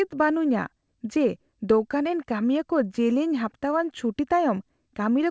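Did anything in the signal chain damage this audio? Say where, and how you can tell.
No, nothing along the chain has harmed this speech; it came through an ordinary call path using G.722 at 64 kbps, and the absence of anything above 8 kHz is simply the ceiling that codec carries, not damage.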